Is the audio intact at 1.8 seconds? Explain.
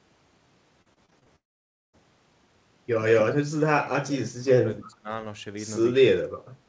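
No. At 1.8 s the sound sits inside a long network dropout running from about 1.36 to 1.95 s, most likely caused by packets that never reached the receiver. About 0.58 s of audio is lost. The receiver extends the last sound as a fading buzz, then leaves silence for roughly half a second before the audio resumes. On a spectrogram, the smeared, decaying tail gives way to an empty band, and the waveform flattens to near zero.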